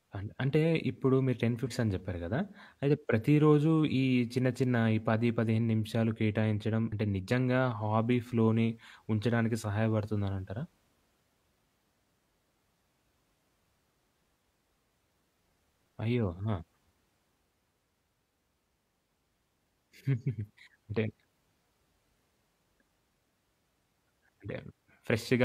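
Speech clip with damaged data in a compressed stream: corrupted bytes twice made the decoder misread frames and lose sync while it hunted for the next valid header, producing brief garbled blips of about 50 ms at 1.63–1.68 s and 6.88–6.92 s.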